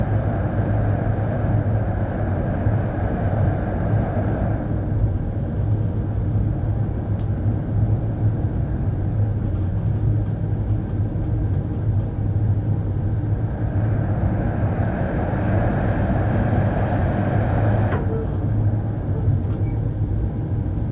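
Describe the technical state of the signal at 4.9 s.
At 4.9 s the signal is intact, with no dropout, clipping, distortion or other fault at that moment.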